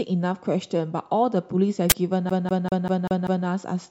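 From 1.90 to 1.92 s an uninitialised buffer plays stale memory as audio, consistent with a 1024-sample block: a harsh, very loud burst showing as a broadband vertical stripe.

From 2.30 to 3.47 s the speech is a CD stuck on one turn: a 195 ms slice repeats six times with brief mutes, so the waveform shows identical blocks separated by gaps.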